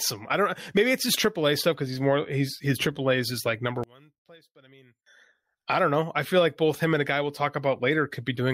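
From 3.84 to 5.06 s the speech collapses to a faint trace, dropping by about 29 dB before returning at full strength. The likely cause is one channel inverted: with one stereo side's polarity reversed, the centred voice cancels when both sides combine to mono.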